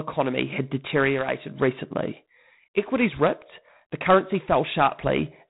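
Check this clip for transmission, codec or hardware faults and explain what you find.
The speech carries G.726 ADPCM coding damage, plainly audible from start to finish. The codec sends each sample as a few bits describing its difference from an adaptive prediction. Here so few bits are spent that the quantisation error rises into a harsh, rasping hiss that swells and fades with the speech level, which fits the 24 kbit/s mode. A spectrogram shows a hard ceiling at 3.9 kHz and a grainy noise floor tracking each syllable's energy.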